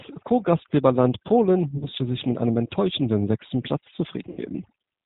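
VoIP packet loss concealed by the speech codec hits this speech clip at 1.78–1.88 s, just before "sich mit einem enttäuschenden", and again at 4.29–4.39 s. About 40 ms and then 80 ms of signal went missing, which fits two and then four 20 ms packets. The decoder filled each gap by carrying its last pitch and vocal-tract filter forward at falling gain, so the sound smears into a fading extension of the voice and stays weak briefly after the stream resumes. The G.729 codec runs throughout, and its damage is plainly audible. It models speech as a filter, a pitch predictor and a handful of pulses per 10 ms frame at what sounds like 8 kbit/s, so nothing above 4 kHz survives and the sound comes out rough and slightly synthetic. Overdone noise removal is also present throughout. The suppressor pulls frequency bands down hard wherever they approach its noise estimate, taking quieter parts of the speech with them, which leaves a lowered background flecked with twinkling specks.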